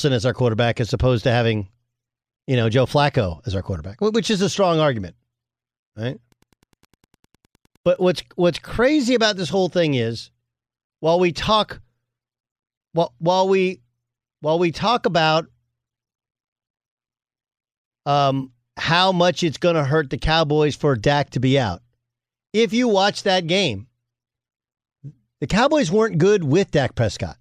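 Wi-Fi interference runs from 6.25 to 8.25 s. A nearby Wi-Fi radio's beacon, sent every 102.4 ms, is rectified by the audio circuitry and leaks in as a steady ticking about ten times a second, faint and well below the speech.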